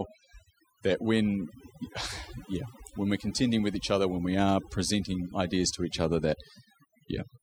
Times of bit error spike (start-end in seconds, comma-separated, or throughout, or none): none